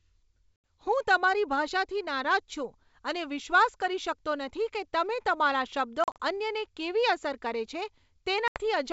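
Packet loss on an ADPCM call hits at 0.57–0.67 s (80 ms lost), at 6.04–6.23 s (100 ms scattered, runs up to 40 ms) and at 8.48–8.60 s (80 ms). Each loss leaves a hard-edged silent hole, then the speech resumes slightly distorted, because the decoder's predictor and step size have drifted from the sender's.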